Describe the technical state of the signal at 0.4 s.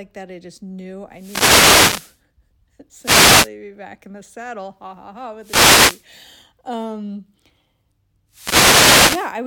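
At 0.4 s the speech signal is intact, with no audible fault at that moment.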